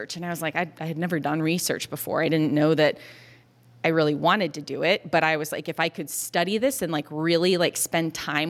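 No dropouts, clicks, distortion or other technical faults can be heard anywhere in the recording.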